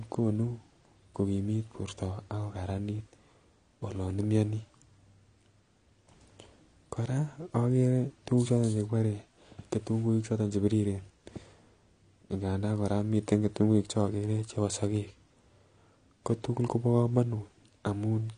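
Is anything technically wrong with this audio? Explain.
Yes. Throughout the speech, nothing sounds above 9.9 kHz, and the remaining band has a smeared, warbling quality with fizzy sibilants. That is likely AAC compression. An AAC-LC encoder starved of bits, consistent with roughly 32 kbps, drops the top band and quantises coarsely.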